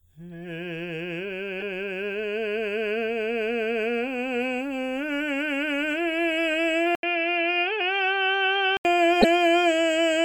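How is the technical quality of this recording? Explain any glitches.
The music has two kinds of fault: corrupt frames in the decoded stream and a stretch where the recording drops to a duller, narrower sound.

Corrupt frame decoded, at 1.60 s and again from 9.21 to 9.25 s. Damaged bits inside a compressed frame were read as if valid, so the decoder rebuilt that slice of the music with wrong gains and misplaced spectral energy. The first hit spans a single frame and gives a fairly soft blip. The second spans a couple of frames and is much louder, a sharp squeaky burst cutting across the music.

Input switched to a poorer device, from 6.95 to 8.85 s. An 80 ms gap of silence opens the section. After it the music turns dull and boxy, with nothing above 5.9 kHz, and it sits a little quieter, over a faint new noise floor well beneath the music. This is likely a change of input to a lower-grade microphone or a headset's call profile with a narrower band.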